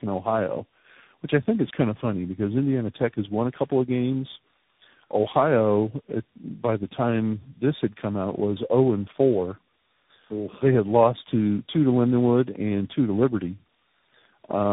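Speech, with tandem speech coding audible throughout: the sound is rough, muffled and warbly, with nothing above 3.8 kHz, which fits three speech codecs in a row, each re-encoding the previous one's output, finishing on a CVSD stage.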